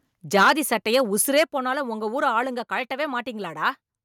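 From 0.35 to 0.52 s the speech has a harsh, crackling edge. This is microphone overload. The peaks run about 8 dB past the converter's limit, and roughly a tenth of the samples are flattened. The likely cause is input gain set too high. At 0.43 s, inside that burst, the level drops suddenly by about 3 dB. This is the microphone volume stepping down, likely call software cutting the input after detecting clipping. Overload returns from 0.93 to 1.0 s, milder at about 2 dB over. A few percent of samples are cut, likely from the same high gain. From 1.36 to 1.43 s it crackles again, about 5 dB over, with around one sample in twenty clipped. The likely cause is unchanged. At 1.44 s, just before "போனாலும் உங்க ஊரு", the volume steps down by about 6 dB. This is likely another automatic gain cut. At 2.46 s, just after those words, it steps down once more by about 2 dB, likely the same correction again.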